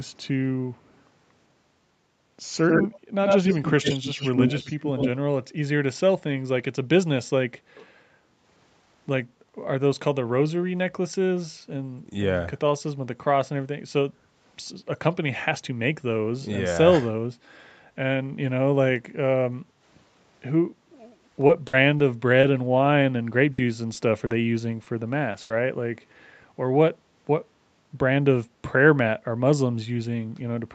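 Echo leak at 0.74–1.0 s, 2.61–3.0 s and 3.25–5.11 s: a delayed copy of the speech trails it, very faint at first with a 162 ms lag, then about as loud as the voice with a 95 ms lag. This is likely a loudspeaker echo that the far side's canceller failed to remove.

Background gated by the echo canceller at 7.6–8.32 s, 14.12–14.37 s and 19.65–19.81 s: the canceller clamps the microphone, so room sound dips by about 8 dB, then returns.

Repeated packet loss (robotic sound) at 21.47–22.60 s and 23.44–25.52 s: the stream loses audio over and over in holes of up to 60 and 80 ms. Each hole is patched by stretching the last sound, which makes the speech choppy, with pieces missing.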